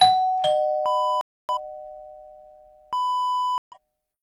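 The audio drops out twice with corrupt frame muted faults, from 1.21 to 1.50 s and from 3.58 to 3.77 s. Damaged compressed frames were rejected by the decoder and replaced with silence, and the gap lengths point to a run of several frames each time. On a waveform these appear as abrupt flat lines. On a spectrogram they are blank vertical bands with hard edges, and the surrounding timing stays intact.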